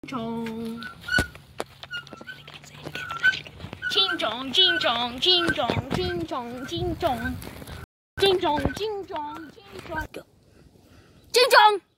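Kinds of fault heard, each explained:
Loud pop: A single sharp pop rides on top of the sound at 3.73 to 3.77 s, about 10 dB above the surrounding level, while the audio carries on beneath it. It is likely a voltage step or pulse from a plug, switch, static discharge or driver glitch, shaped by the circuitry after it. On a waveform it shows as one tall narrow spike; on a spectrogram, as a thin vertical stripe spanning nearly all frequencies.
Playback stall: The sound cuts out in mid-flow at 7.84 s and stays silent for about 336 ms, until 8.18 s. The likely cause is a player that ran dry of buffered data or had its thread blocked, so nothing reached the output until it recovered. A waveform shows a flat line across the gap, and a spectrogram shows a clean blank column where energy drops away at every frequency.
Time-compressed catch-up: Immediately after the gap, from 8.18 to 8.84 s, the audio runs at 1.5 times normal speed while keeping its pitch. 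The player is clearing its backlog by removing short slices and cross-fading across the joins. On a spectrogram, features in this stretch look squeezed horizontally and harmonics stay at unchanged heights; the waveform shows events packed closer together, with small seams at the splices.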